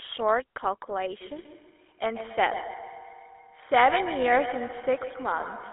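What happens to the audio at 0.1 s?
At 0.1 s the speech is already passing through a GSM full-rate codec, which runs from the very start to the end of the clip. The codec rebuilds the voice from a vocal-tract model excited by evenly spaced pulses, discarding most of the excitation detail, which fits a 13 kbps full-rate link. The sound is confined to roughly 300 Hz to 3.5 kHz, with a plainly audible buzzy, gravelly roughness over the voice.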